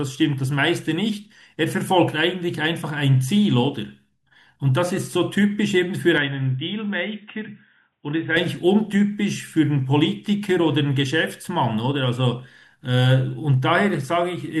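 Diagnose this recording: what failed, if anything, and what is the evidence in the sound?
Between 6.18 and 8.37 s the speech abruptly loses its top end, with nothing above 3.8 kHz, and drops about 5 dB in level, then returns to full bandwidth. The change is seamless, with no gap at either transition, and the new noise floor sits low, roughly 50 dB under the signal. At the capture or driver stage, this is likely an input switched to a poorer device, such as a narrowband headset profile, and then switched back.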